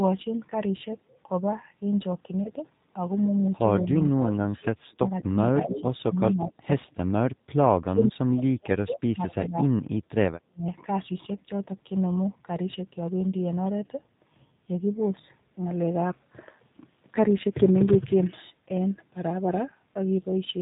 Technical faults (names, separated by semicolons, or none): G.729 codec; VoIP packet loss concealed by the speech codec; background gated by the echo canceller